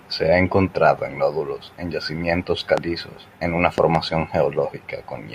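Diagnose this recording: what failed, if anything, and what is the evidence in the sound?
A loud pop, most likely an electrical transient in the analogue wiring such as a plug, switch or static discharge, hits this speech recording twice. The first is a single sharp pop at 2.78 to 2.80 s, just after "en nódulos en yacimientos". The second, at 3.78 to 3.97 s after "en una", is a pair of pops in quick succession. Each peaks roughly 15 dB above the speech. The speech carries on underneath without a break, which separates these added voltage pulses from a dropout.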